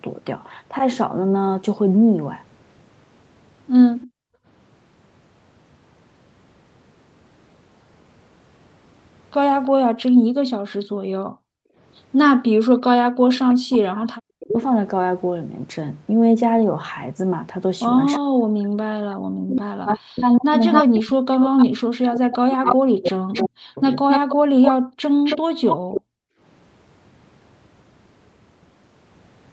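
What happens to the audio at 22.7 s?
At 22.7 s the speech is caught in speech suppressed in double talk, running from 18.18 to 23.96 s. The likely cause is an echo canceller treating overlapping talk as echo and turning everything down. The waveform collapses in pieces, up to about 40 dB, totalling roughly four seconds, and the spectrogram shows gaps and a thinned top.

An echo leak runs from 19.9 to 26.01 s, likely from a loudspeaker echo not fully cancelled. A copy of the speech returns 0.27 s late, only about 5 dB below it. On a spectrogram it shows as smeared, doubled harmonics trailing the speech.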